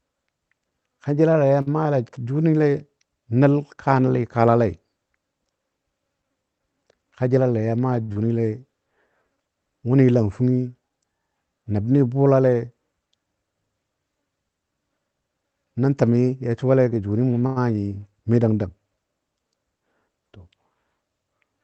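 At 1.61 s there's a short stall from a late packet: the jitter buffer ran dry, so the receiver held the last sound for about 51 ms until the packet showed up, then carried on from the same spot. Nothing gets lost, but that sound hangs a touch too long, with a faint buzzy dip.

From 6.92 to 7.37 s there's a jitter buffer speed-up. The buffer had built up extra delay, so the receiver trimmed out tiny pitch-period slices, roughly 40 ms in total. The speech runs at about 108% speed with the pitch unchanged, so that stretch sounds slightly rushed.

At 8.02 s another late-packet stall holds the sound for 63 ms. Right after it, at 8.12 s, comes a short concealed packet loss: 40 ms never arrived, and the receiver bridged the gap with about 20 ms of continued sound before blending back in. It comes across as a quick smear or wobble, and a brief consonant could drop out there.

The last stall, at 17.46 s, is the longest at 98 ms, a held, slightly droning sound. 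Throughout the clip the call codec's top end stops around 8 kHz, which fits a fairly low-bitrate Opus setting.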